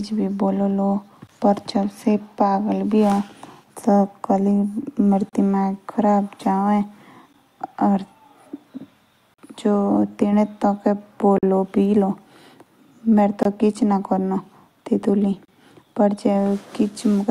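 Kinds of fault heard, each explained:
Gap between stream segments: hard-edged silences of 10 to 45 ms recur every 2 s in the speech; time is inserted, not audio lost as in a dropout.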